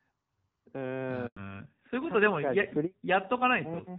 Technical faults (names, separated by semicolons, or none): handover gap; fallback to narrowband